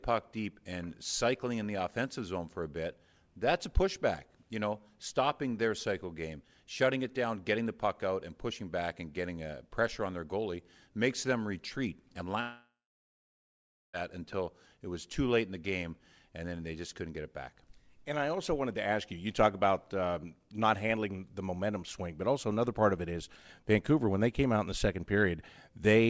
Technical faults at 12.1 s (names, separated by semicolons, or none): short concealed packet loss